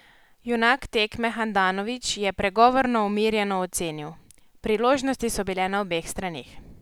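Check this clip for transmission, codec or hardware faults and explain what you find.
No faults detected.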